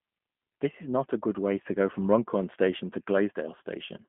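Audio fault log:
Throughout, G.729 codec: the speech sounds rough and slightly synthetic, rebuilt from a vocal tract model at what sounds like 8 kbit/s, with nothing above 3.7 kHz.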